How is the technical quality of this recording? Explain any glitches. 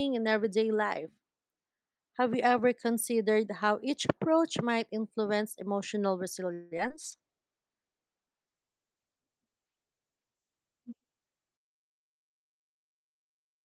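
The speech is clean until just past six and a half seconds, then runs into a cluster of network faults that lasts to the end.

Call audio freeze, 6.53 to 6.73 s: the last sound is stretched into a fading buzz or hiss for about 180 ms, likely because delayed packets starved the jitter buffer. Nothing is lost, so the speech resumes slightly later.

Short concealed packet loss, 6.77 to 6.81 s and 6.89 to 6.92 s: around 20 ms of audio each time never arrived, and the receiver patched the hole by extending the preceding sound. Each is heard as a brief smear or wobble.

Call bitrate drop, from 7.05 s to the end: the encoder falls from 40 to 11 kbps and the audio band narrows from 20 kHz to 8 kHz. The speech turns muffled and rough, worst for about four seconds.

Jitter buffer speed-up, 11.04 to 13.61 s: the receiver trimmed tiny pitch-period slices, roughly 150 ms in total, to drain excess buffered audio. 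The speech runs about 6% faster at unchanged pitch and sounds hurried.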